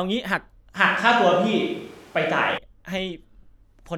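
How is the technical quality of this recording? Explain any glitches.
The recording has one glitch, a switch to a distant microphone from 0.75 s to 2.58 s. The close microphone's feed likely dropped out, leaving only a pickup further from the talker. The speech abruptly turns roomy and hollow, losing low-end body, and room noise rises to roughly 30 dB below the speech. The level barely shifts, so the change is heard as tone and space rather than loudness, and it snaps back just as suddenly at 2.58 s.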